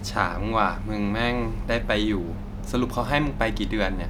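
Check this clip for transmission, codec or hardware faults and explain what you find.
Nothing wrong can be heard anywhere in this speech.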